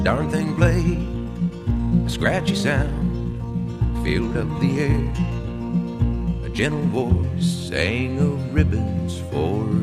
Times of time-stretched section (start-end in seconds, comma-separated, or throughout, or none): 0.00-7.24